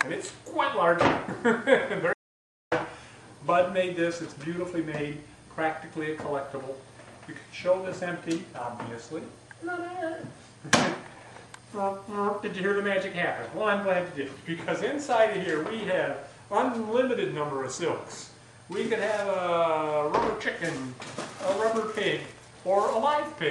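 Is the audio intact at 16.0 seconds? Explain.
Yes, the audio at 16.0 seconds is intact, with no dropout, click, distortion or other fault at that moment.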